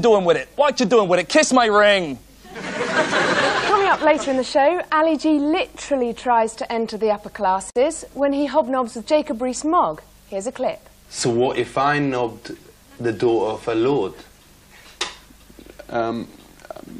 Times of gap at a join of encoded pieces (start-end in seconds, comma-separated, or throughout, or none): 7.70-7.76